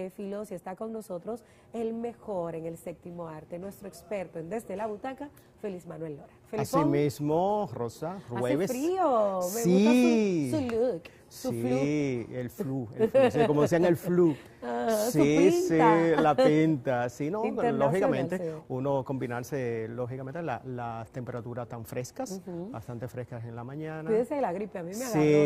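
No technical faults can be heard anywhere in this audio. Nothing in it calls for a timestamp or a repair.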